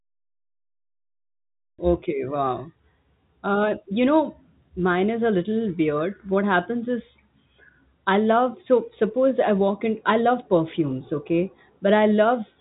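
Nothing stood out on listening to this speech recording, which carries the narrow band of G.711 telephone coding with no content above about 3.8 kHz.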